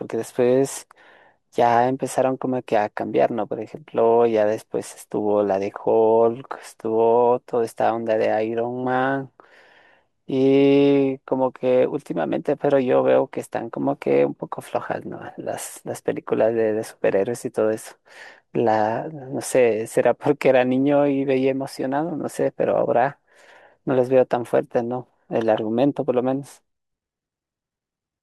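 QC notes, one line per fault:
No technical faults heard anywhere in the speech; nothing to log.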